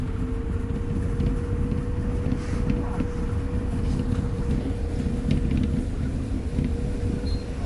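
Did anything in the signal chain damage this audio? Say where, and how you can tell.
Yes, likely MP3 compression throughout, at the codec stage. Nothing survives above 11.3 kHz, and weak components flicker watery, which fits a starved bitrate around 48 kbps.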